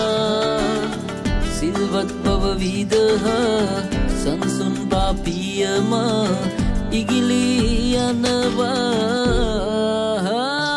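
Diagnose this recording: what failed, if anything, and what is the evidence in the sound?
Nothing in the chain failed.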